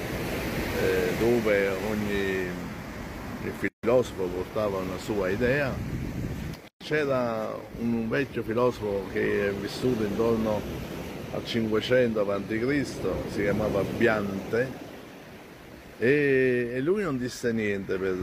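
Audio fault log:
3.68 s and 6.68 s: gap at a join of encoded pieces. Silences of 151 ms and 126 ms, from untrimmed encoder delay and padding, show as flat waveform stretches and blank spectrogram bands with softened edges.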